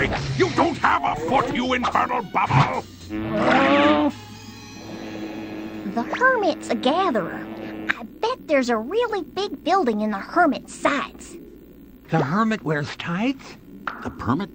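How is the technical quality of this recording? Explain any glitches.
Two brief AAC frame loss with concealment glitches mar the recording, at 1.08–1.14 s and 11.48–11.55 s. Each gap of about 43 ms, consistent with one dropped frame, is patched by the decoder reusing the previous spectrum, giving a short smeared, noisy blip. A spectrogram shows a blurred vertical smudge.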